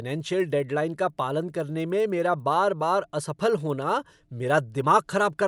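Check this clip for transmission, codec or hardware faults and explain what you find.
A steady ticking runs under the speech for the whole clip, about ten small clicks per second, only audible while sound is present. This is a resampler restarted on every block: each 100 ms block was converted from 24 kHz to 48 kHz separately, leaving an error at every block edge.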